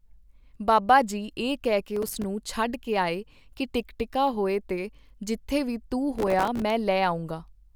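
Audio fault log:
1.96–2.24 s, processor overload crackle after "ਇਹ ਕਹਿ ਕੇ": processor missed about fifteen buffers of roughly 3 ms, each dropped to silence, giving gritty crackle before "ਛੱਡ ਕੇ ਆਏ ਕੀ".
6.19–6.70 s, processor overload crackle after "ਤੇ ਜਿੱਥੇ ਵੀ ਤੂੰ": around thirty missed short buffers, each replaced by silence with hard edges, producing a longer tearing crackle over the speech.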